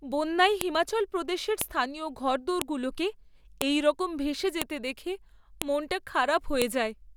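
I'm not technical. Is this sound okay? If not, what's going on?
No. There's a sharp click at 0.61, 1.61, 2.62, 3.62, 4.62, 5.62 and 6.62 seconds. This is a file header played as audio. The speech was stored in one-second pieces, and when they were joined, each piece's small block of file information was left in and played as sound. What sets it apart from ordinary pops or mouth noises is the rhythm: exactly once a second, whether anyone is talking or not.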